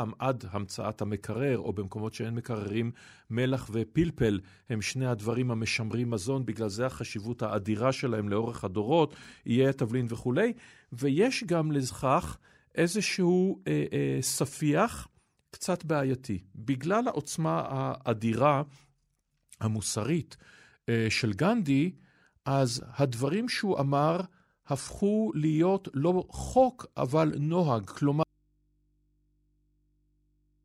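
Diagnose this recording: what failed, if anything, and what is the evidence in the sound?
At 28.23 s the speech cuts off abruptly and never returns; what remains is mains hum about 45 dB below the speech level. This is an audio dropout to a faint residue, likely a connection failing in the analogue wiring, leaving an open, still-live input.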